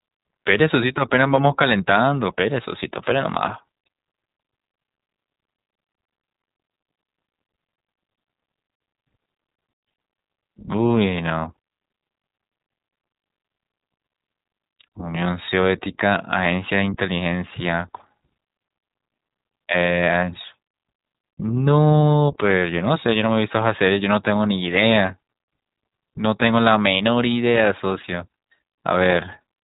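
Speech all the way through, and it's been squeezed through the iLBC codec. Nothing gets past about 3.8 kHz, so it's strictly narrowband, and the codec damage is plainly audible: that slightly rough, synthetic edge iLBC leaves when it rebuilds the excitation for each frame on its own, without leaning on the frame before. The character fits 20 ms frames at around 15.2 kbps, the higher iLBC mode.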